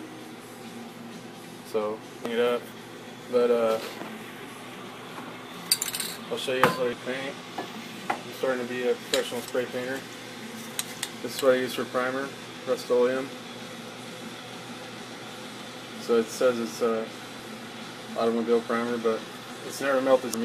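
At 2.26, 6.93, 17.39 and 20.34 s, damaged data in a compressed stream yields brief glitches: the decoder misreads corrupt frames and loses sync until the next header. These glitches last about 4 ms each.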